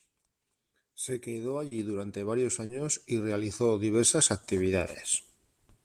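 Short concealed packet loss at 1.67 to 1.73 s, just before "durante varios", and again at 2.65 to 2.71 s, between "durante varios" and "y realizó diversas". Each time about 40 ms of the speech arrived too late to decode, and the receiver filled the gap by extending the preceding sound, following its pitch where voiced and as shaped noise where not, then blending back into real audio. Each gap comes through as a brief smear or wobble.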